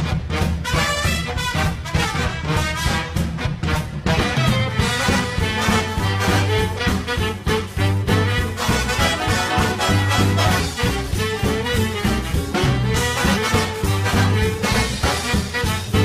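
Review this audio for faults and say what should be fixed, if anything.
Compressed frames skipped at 2.0, 4.14, 6.74, 9.11, 10.55, 13.33 and 15.84 s: whole compressed frames, each about 46 ms long, never reach the output, so the sound jumps forward by roughly a third of a second, half a second or nearly three quarters of a second. To prevent it, check file integrity and use error-resilient transport so damaged frames are recovered.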